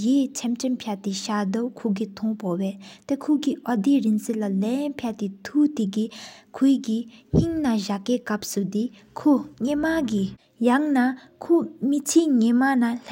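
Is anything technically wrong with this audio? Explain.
No, this speech recording shows no technical faults: the signal is continuous and steady, with nothing in it that points to a problem in recording, processing or playback.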